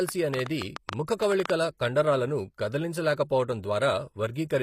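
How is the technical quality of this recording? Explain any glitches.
The recording has three technical problems: codec damage throughout, a burst of clicks near the start, and a brief smear before one attack.

Throughout the speech, the treble is likely rebuilt by HE-AAC compression at a low rate, consistent with about 24 kbps. Upper bands are copied up from lower ones, so harmonics misalign. The damage is plainly audible, with nothing above 15.5 kHz, and sibilants sound gritty or metallic.

From 0.09 to 1.51 s, a train of clicks is likely caused by interference or a faulty connection injecting repeated pulses. About fifteen similar clicks arrive at an uneven pace, around 8.5 per second, rising about 15 dB above the speech as ticking or popping.

At 3.16 s, pre-echo appears where the codec spread quantisation noise across a block. The noise suited to a sharp attack late in that block leaked into the quieter moment before it, producing a hiss lasting about 19 ms and a softened, smeared onset.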